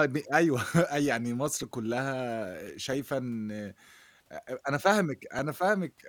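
At 2.93, 4.48 and 5.39 s the speech hits an underrun with held sample. The output runs dry and the converter holds its last value, flat for 0.42 ms, then 2 ms twice. Nothing's lost, so playback resumes in place with only a faint tick.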